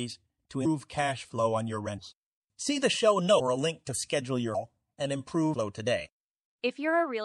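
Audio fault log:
Throughout: MP3 compression, plainly audible. The speech has a watery, swirling edge and dull treble, because the encoder likely ran short of bits, something like 64 kbps, so it cut the top end and let weak frequency lines flicker on and off between frames.
3.39 s and 5.53 s: compressed frames skipped. At each point the audio jumps ahead, by roughly a third of a second at the first and well over half a second at the second, with only a brief smeared blip at the join. Overlapping neighbouring frames blur the splice.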